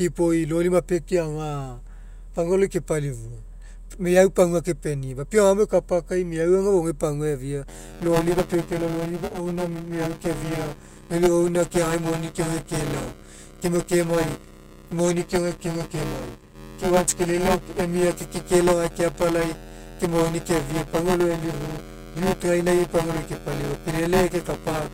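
In this speech clip, buffer tearing sets in at 7.68 s and persists to the end: writer and hardware reader have slipped, so roughly a fifth of each period replays audio about 10 ms old, producing a robotic 172 Hz buzz that fits a 256-sample buffer.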